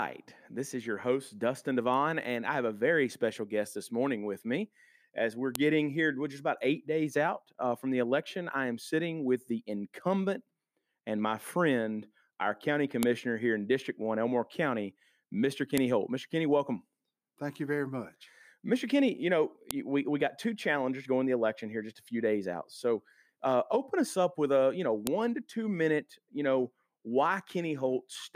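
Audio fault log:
5.55, 13.03, 15.78, 19.71 and 25.07 s: file header played as audio. A sharp, loud click at each join, e.g. just before "here we're just about" and after "with a you know", where leftover WAV header bytes were decoded as samples when pieces were joined.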